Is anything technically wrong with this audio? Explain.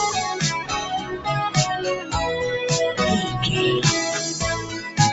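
Yes. A noise suppressor applied to music or sounds stays active throughout, treating steady, non-speech material as noise and swinging its level by around 10 dB, so the sound pumps rather than fading evenly.

Sound cut by the noise suppressor happens at 0.99–1.27 s and 4.61–4.98 s, where sustained parts sink by about 9 dB while onsets survive. That distinguishes it from a dropout, which would remove everything at once.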